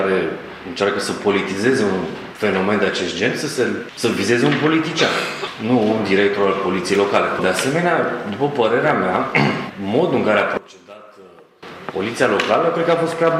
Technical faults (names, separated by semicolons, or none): one channel inverted